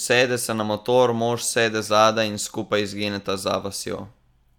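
No technical faults are audible.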